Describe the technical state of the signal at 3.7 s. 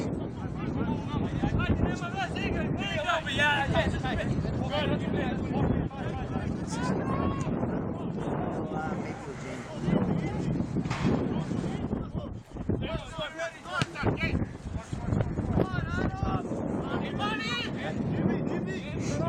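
At 3.7 s the signal carries sample clock jitter, present across the whole clip. Samples land around a microsecond early or late, producing an error roughly 45 dB below the signal that grows with waveform slope, heard as hiss. A spectrogram shows a faint broadband haze that thickens under loud, bright passages and disappears in silences.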